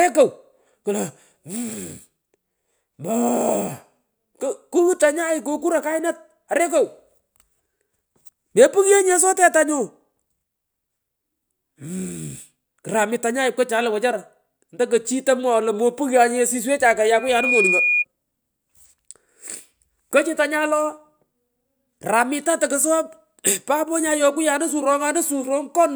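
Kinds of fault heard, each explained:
Loudspeaker feedback squeal: the mic picks up its own speaker and the loop runs away, so a 2.4 kHz tone swells quickly to about speech level near 17.2 s.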